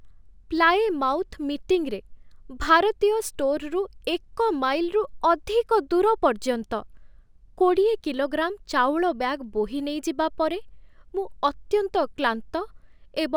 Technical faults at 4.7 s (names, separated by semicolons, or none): imaging from linear upsampling